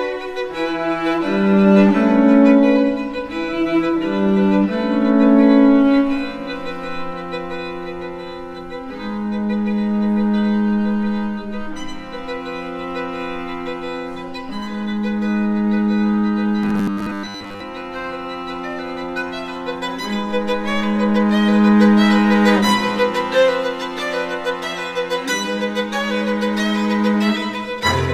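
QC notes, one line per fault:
16.63–17.63 s: robotic sound from repeated short buffers. A rigid, metallic 100 Hz buzz. Likely a 10 ms fragment looped, skipping most real audio.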